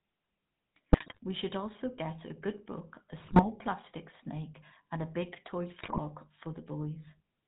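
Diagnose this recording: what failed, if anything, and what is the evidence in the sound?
Codec stage: a GSM full-rate codec leaves the speech buzzy and gravelly throughout, with nothing above 4 kHz. Pulse-driven vocal-tract modelling at 13 kbps discards most of the excitation detail.

Network stage: GSM bit errors cause squawks and gargling at 0.92–1.19 s, 3.19–3.47 s (after "a good book a") and 5.82–5.99 s (after "and a big toy"). Corrupted filter, pitch and gain values distort those frames.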